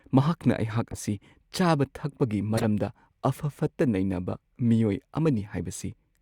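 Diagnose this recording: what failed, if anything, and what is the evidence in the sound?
The fault sits in the codec stage: a corrupt frame was decoded and played. Three short disturbances break into the speech. The first runs from 0.90 to 0.98 s and peaks at about -20 dBFS. The second, from 2.54 to 2.64 s, is the loudest, at about -15 dBFS, and its length suggests several frames in a row. A faint disturbance at 3.68 s sits near -45 dBFS. Flipped bits gave the decoder wrong gains or codes, so energy landed at wrong frequencies for each damaged frame.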